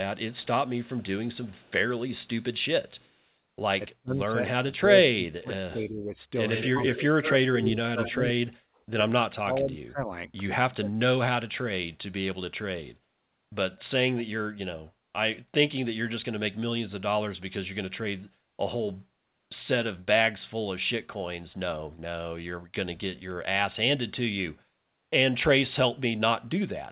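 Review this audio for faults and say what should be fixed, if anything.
A faint delayed double of the speech trails it from 0.33 to 1.72 s and again briefly at 3.0 s, arriving about 258 ms late and sitting far below the direct sound. From 6.53 to 8.31 s a much louder copy follows only 120 ms behind, nearly as strong as the speech itself. This is echo leak: the far end is likely playing the call on a loudspeaker, and its echo canceller is letting part of the microphone pickup return down the line. Prevention: give the far end a better-tuned echo canceller, or have that side use a headset.

Between 3.89 and 6.14 s the talker's level sinks and drops out in pieces for roughly one and a half seconds in total, at worst by about 30 dB. At 6.68 to 7.02 s there is a brief dip of about 10 dB. From 7.6 to 10.92 s the speech is heavily gated, down by about 40 dB across roughly two seconds. This is speech suppressed in double talk. 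With both sides talking at once, the echo canceller likely could not tell this talker from the loudspeaker echo and attenuated everything. Prevention: use a canceller with reliable double-talk detection, so that it holds back less gain when both sides speak. The G.711 mu-law path through the call stays band-limited at 4 kHz.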